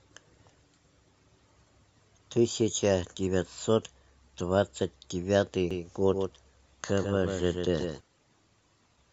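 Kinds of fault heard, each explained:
Doubled audio track: from 5.71 to 8.01 s a second full-band copy of the speech trails about 150 ms behind, roughly 5 dB quieter, likely from a slower capture path. Spectrogram and waveform show every onset twice, with dry, abrupt copy edges.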